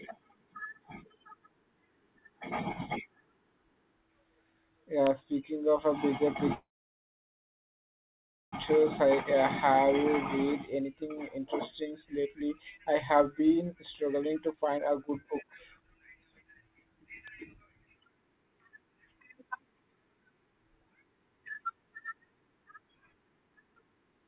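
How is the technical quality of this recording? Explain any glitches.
The recording has several clear glitches on top of a telephone-band call path: nothing reaches above 4 kHz, and the coding noise fits G.711 mu-law at 64 kbps.

Electrical switching spikes, at 5.07 s and 17.27 s: a nearby switch, motor or static discharge likely arced briefly, and the audio line picked up that burst. Each one is heard as a sharp snap or a tight cluster of clicks laid over the speech, shorter than a few milliseconds.

Call audio freeze, from 6.54 to 8.54 s: packets were likely held up in transit and the jitter buffer ran dry. The receiver stretched the last sound into a short fading buzz, then about 1.9 s of silence. The speech resumes where it stopped, with nothing lost, only delayed by about 2 s.

Jitter buffer speed-ups, from 8.70 to 10.05 s and from 10.45 to 17.08 s: after the stall, the buffer held more audio than it aims for. 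To work off the extra delay, it repeatedly cut out short pitch-period slices. The first stretch runs at 106% speed and removes about a tenth of a second. The second runs at 127% and removes about two seconds. The pitch stays the same, but the talking sounds noticeably hurried, most of all in the longer stretch.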